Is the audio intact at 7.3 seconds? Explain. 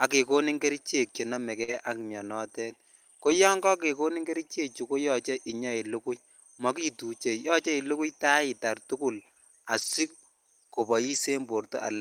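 Yes, the speech at 7.3 seconds plays through intact, with no fault of any kind at that moment.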